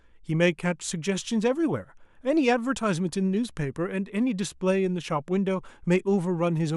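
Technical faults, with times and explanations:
No technical faults can be heard anywhere in the speech signal.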